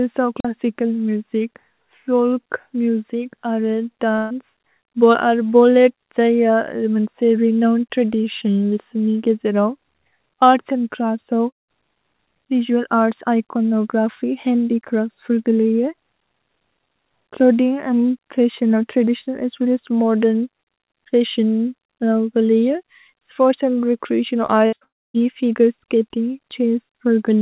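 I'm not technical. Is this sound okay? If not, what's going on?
No. There are four kinds of fault in this speech.

At 0.39 to 0.45 s there is a wireless microphone squelch dropout. The radio signal weakened, so the receiver muted the sound for about 43 ms. You hear a brief hiss, a tiny hole, then the voice returns.

A burst of packet loss happens at 4.16 to 4.33 s, and twice more back to back at 24.66 to 24.84 s. Chunks of the call arrived too late. The receiver stretched the last sound and let it fade. Then the speech jumps ahead, with 150 ms missing the first time and 60 ms each of the later times.

At 11.50 to 11.71 s and again at 24.84 to 25.17 s, the audio stretches briefly, then goes mostly silent, for about 0.16 s and 0.27 s. The speech comes back further on, with parts gone. The likely cause is a long network dropout.

Right after "स्पोर्त्स् अन्द् रेच्रेअतिओन्", at 24.46 to 24.51 s, there is a short concealed packet loss. 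About 30 ms never arrived. The receiver patched it with a copy of the previous sound, so you hear a quick smear.

The whole call also sounds phone-like, with nothing above 4 kHz. That is normal for this kind of call line.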